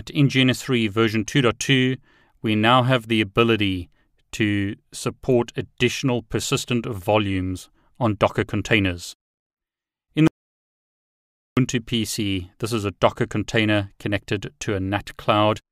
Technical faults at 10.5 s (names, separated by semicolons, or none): audio dropout to silence